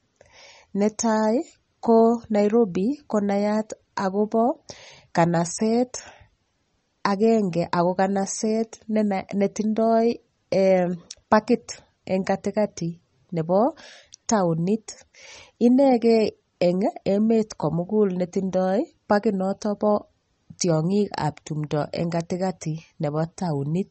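An encoder likely short of bits, consistent with MP3 compression at around 32 kbps, cuts everything above 8.4 kHz throughout and drops weak detail, leaving the speech dull, watery and swirly.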